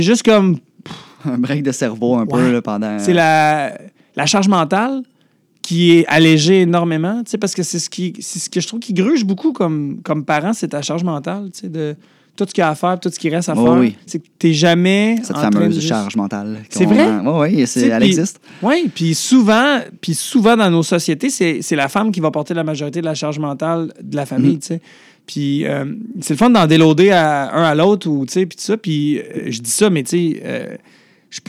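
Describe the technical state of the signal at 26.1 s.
Hard clipping is present at 26.1 s, as it is throughout the clip: the speech is driven about 8 dB past what the signal path can carry, so the loudest peaks, a small fraction of samples, are sheared flat, adding high harmonics heard as crackle on louder moments.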